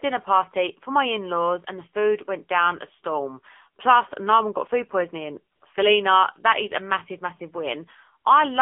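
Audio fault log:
throughout, AMR narrowband mobile codec: band held to 250 Hz–3.5 kHz; the few-pulse vocal-tract model leaves speech plainly buzzy and synthetic, fitting a 7.4 kbps mode.
5.56–5.62 s, AMR comfort noise: after "one got food poisoning", speech frames stop for 60 ms and smooth synthetic noise briefly switches in for the real background.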